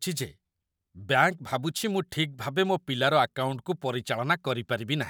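No technical faults can be heard anywhere in the speech. Nothing in the recording calls for a time stamp or a closer listen.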